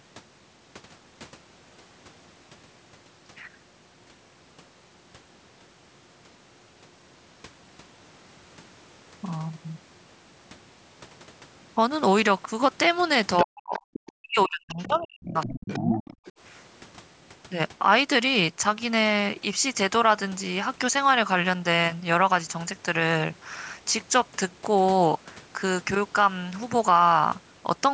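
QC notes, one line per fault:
13.38–13.44 s, 13.74–14.12 s, 14.72–15.05 s and 15.41–16.32 s, other side's voice leaking through: a second, fainter voice surfaces in scraps under the main talker, roughly 10 to 20 dB below the speech, strongest in the first and last bursts. The likely cause is the far end playing over the talker's loudspeaker and reaching the microphone, with the echo canceller only partly removing it, so residue slips through in short fragments.
13.44–13.81 s and 14.14–16.02 s, speech suppressed in double talk: the main talker's voice sinks sharply, by something like 40 dB at its deepest, for about 0.4 s and then about 1.5 s, overlapping the leaked voice. This points to both sides talking at once. The echo canceller could not tell its own talker from the loudspeaker echo, so it turned everything down together, clipping the near-end speech along with the echo.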